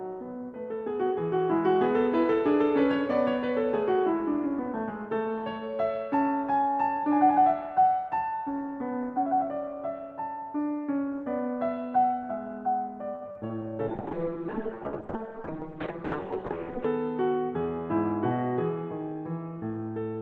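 At 13.15 s the music hangs for a moment: a short stall from a late packet. A packet hadn't arrived when it was due, the jitter buffer ran dry, and the receiver stretched the last bit of sound for 60 ms until the packet showed up, then picked up right where it left off. Nothing is actually lost, but that sound lingers a touch too long with a faint buzzy edge, and the playout delay grows by 60 ms.

Right after, there are two short concealed packet losses, at 13.31 s and 13.47 s. Here audio really did go missing, about 40 ms in the first and 20 ms in the second. Each time the receiver patched the hole by carrying the preceding sound forward and then blending back into the real signal. What you hear is a quick smear or wobble at each spot.

From 13.89 s to the end there's a call bitrate drop. The bandwidth estimate fell, and the encoder was pushed from 40 kbps down to 6 kbps, sitting at that bottom rate for 3.02 s. 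At that rate Opus quantises much more coarsely and also narrows the band from 20 kHz to 8 kHz, so the music loses its top end and turns dull and muffled, with a rough, slightly watery texture.

Inside that stretch, from 15.31 s to 15.80 s, comes a jitter buffer speed-up. The buffer was holding more audio than its target, probably because of the earlier stall, so the receiver trimmed out a series of tiny pitch-period slices, about a twentieth of a second in total. Playback runs at 108% speed with the pitch unchanged, and the music briefly feels rushed, its tempo nudged forward.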